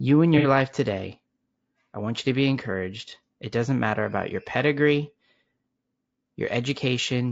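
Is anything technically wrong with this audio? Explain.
Yes. Two faults are audible.

Throughout the clip, the speech sounds rough and grainy, with noise between the harmonics and a thin, synthetic top band. The likely cause is low-delay AAC compression. Its short frames resolve pitch harmonics poorly, and the damage fits a bitrate near 32 kbps.

From 0.38 to 0.47 s there is AAC frame loss with concealment. The speech turns briefly smeared and noisy there. The decoder rebuilt the gap from the last good spectrum, and the short dropout fits about two lost frames.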